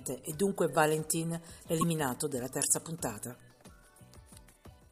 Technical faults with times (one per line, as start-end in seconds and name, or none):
4.50-4.56 corrupt frame decoded